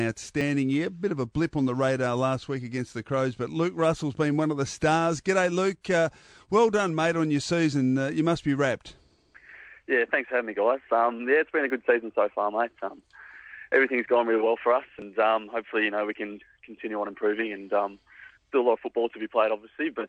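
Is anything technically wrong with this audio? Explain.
Yes, there are three small jumps in the sound at 0.41, 11.7 and 14.99 s. That's likely a dropped buffer (overrun): tiny chunks, a hundredth of a second to a few hundredths, got overwritten before capture, so the two sides are spliced together.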